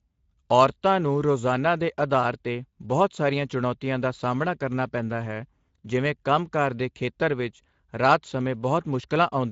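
Speech with Speex codec damage throughout: hoarse, grainy excitation, nothing above 7.7 kHz, and a noise-like top band, which fits a Speex rate around 17 kbps.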